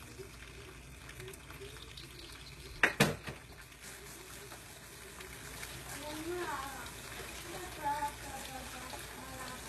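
Throughout, the treble sounds rebuilt rather than recorded, gritty and metallic, with nothing above 12.3 kHz. This is likely HE-AAC compression at a very low bitrate, around 16 kbps.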